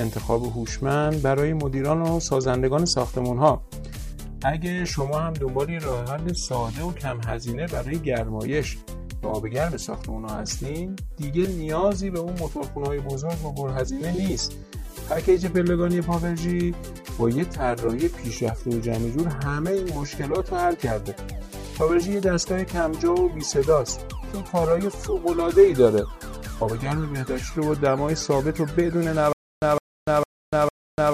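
From 29.33 s to the end, a stutter with silent gaps: the same 160 ms burst repeats four times, every 453 ms, with about 294 ms of dead digital silence between. Unlike a plain dropout, the fragment itself returns. This points to a likely playback stall.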